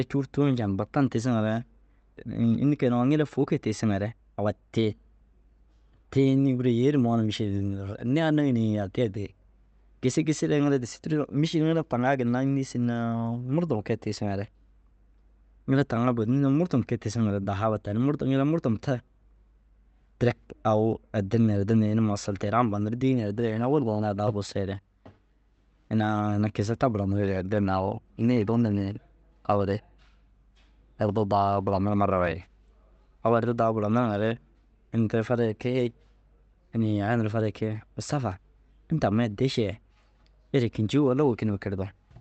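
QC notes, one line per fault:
2.17 s, skip ahead: the sound lurches forward with no gap, as though a short piece were snipped out and the two edges butted together. Roughly 0.4 s of audio never reaches the listener. Later audio was already queued when this stretch was lost in transit or discarded by the jitter buffer, so playback jumped straight to what was waiting, and the delay shrank by about the same amount.
4.05–6.49 s, jitter buffer speed-up: over these two and a half seconds the speech sounds hurried. It runs at about 108% of normal speed while the pitch stays where it was. The buffer was holding more audio than its target, so the receiver trimmed tiny slices, each one or a few pitch periods long, again and again. In total it removed something like a fifth of a second, which compresses the timing without any audible pitch shift. The Opus call path itself limits the audio to an 8 kHz band throughout.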